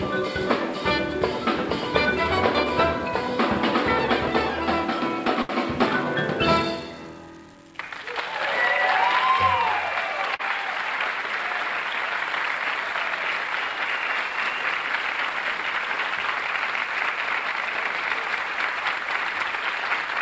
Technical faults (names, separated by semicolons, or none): short stall from a late packet; short concealed packet loss